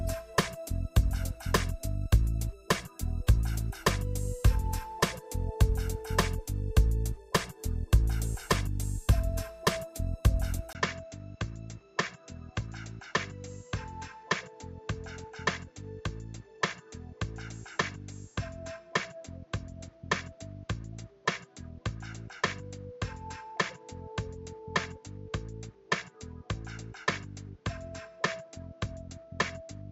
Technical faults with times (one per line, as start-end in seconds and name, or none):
10.73-29.92 input switched to a poorer device